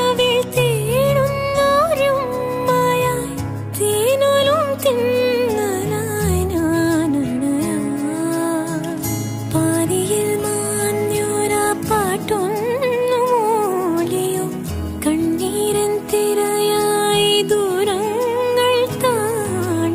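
Clock slip clicks run from 0.12 s to the end of the clip as a fine, even rattle of tiny ticks, each a single-sample discontinuity, arriving roughly every 40 ms, around five hundred in all. The likely cause is two devices running on separate, unsynchronised clocks that differ by something near 500 parts per million. Each time that drift adds up to a whole sample, one sample is dropped or repeated, producing another tick.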